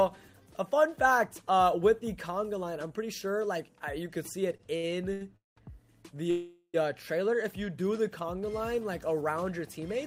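Repeated stalls (stutter) run from 4.57 to 5.58 s, where the audio halts four times. About 350 ms of that second is continuation of the previous sound, with the longest hold at 200 ms. Packets kept arriving late, so the jitter buffer repeatedly ran dry and playback dragged without losing content. A call audio freeze follows at 6.30 to 6.76 s. The last sound is stretched into a fading fill of 432 ms that ends in about 30 ms of silence, and playback then resumes 432 ms later than before. This was likely a delayed burst of packets that emptied the buffer.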